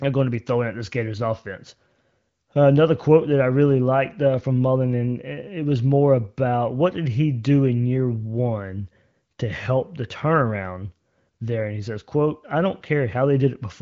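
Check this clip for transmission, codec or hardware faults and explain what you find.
No transmission, codec or hardware faults are present: the speech comes through as wideband HD Voice audio whose clarity fits an AMR-WB rate around 18 kbit/s, with content stopping near 7.5 kHz as that band limit implies.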